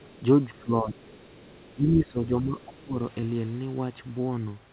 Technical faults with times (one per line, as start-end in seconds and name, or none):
0.00-0.22 other side's voice leaking through
0.54-0.63 other side's voice leaking through
0.64-1.01 speech suppressed in double talk
1.05-1.73 other side's voice leaking through
1.75-2.96 speech suppressed in double talk
2.59-2.65 other side's voice leaking through
3.20-3.24 short concealed packet loss